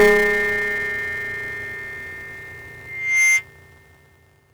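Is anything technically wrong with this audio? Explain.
Yes. Two faults can be heard.

Buffer tearing runs through the whole clip. The program filling the ring buffer and the hardware reading it have drifted out of step, so they cross inside every period. A small slice of each buffer, roughly 15%, replays audio from one lap earlier, about 10 ms old. Each slice has hard joins on both sides. The joins repeat at 200 Hz, which fits a 5 ms period. The result is a steady robotic buzz at 200 Hz, present wherever there is signal.

A loudspeaker feedback squeal runs from 2.80 s to 3.44 s. A microphone is picking up the loudspeaker it feeds. At 2.1 kHz the loop gain passes one, so that frequency reinforces itself on each trip around. The tone swells over roughly 0.4 s into a piercing whistle. It peaks about 5 dB above the rest of the sound.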